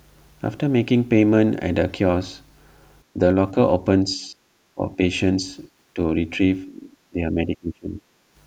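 Speech suppressed in double talk at 4.04–4.34, 4.75–4.99, 5.94–5.98, 6.66–6.94 and 7.1–8.05 s: the speech dips by a few decibels up to a deep cut-out, likely from an echo canceller mistaking it for loudspeaker echo.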